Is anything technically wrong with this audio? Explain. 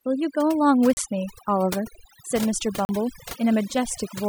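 Yes. Overdone noise removal runs through the whole speech clip. The noise reduction is set too hard, pulling individual frequency bands down or out whenever they sit near its noise estimate. The background drops and breaks up into twinkling specks, as quieter components are stripped too.

There are also two blocks of digital silence, at 0.93 to 0.97 s (about 36 ms) and at 2.85 to 2.89 s (40 ms). Each is a block of silence, consistent with an output buffer not being filled in time. The signal drops out and returns without any fade, so each is heard as a short hole.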